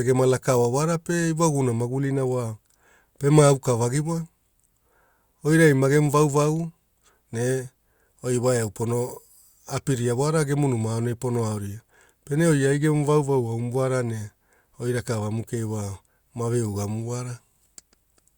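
No technical faults are audible anywhere in the speech recording.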